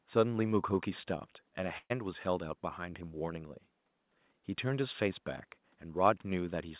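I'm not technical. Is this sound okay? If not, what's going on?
No. A burst of packet loss hits from 1.78 to 1.92 s: call data went missing, so the last sound is held, fades out, and about 0.12 s of speech is skipped.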